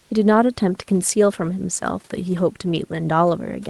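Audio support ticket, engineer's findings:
Comfort noise in place of the background, 0.00–0.10 s at clip start. Likely Opus DTX: sender stops transmitting while its detector hears no speech, and the receiver synthesises fill noise. Real room background, about 43 dB below the loudest parts, becomes a steady, featureless noise about 2 dB quieter until the audio resumes.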